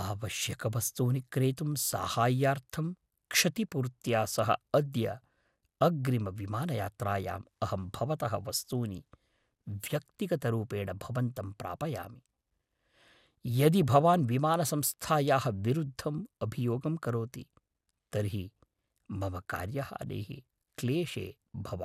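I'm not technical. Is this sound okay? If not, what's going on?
No. At 13.83 s there's a brief DAB burbling: weak digital radio reception garbles some audio data, giving short blips of noise rather than a clean click or silent gap.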